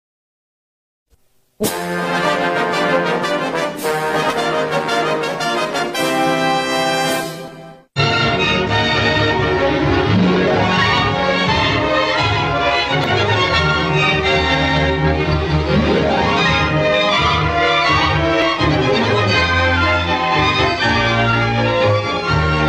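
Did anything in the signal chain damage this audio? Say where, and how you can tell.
Yes. There are jumps with no gap at 7.48, 13.04 and 18.42 s, where the sound skips ahead roughly 70, 70 and 20 ms. This is likely a dropped buffer (overrun) at the driver stage.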